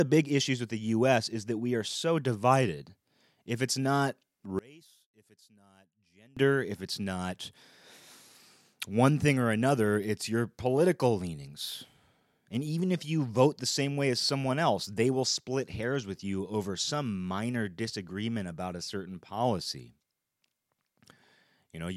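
From 4.59 to 6.37 s the speech collapses to a faint remnant, dropping by about 29 dB before returning at full level. The likely cause is one channel inverted: with one stereo side's polarity reversed, the centred voice cancels when the channels are summed to mono.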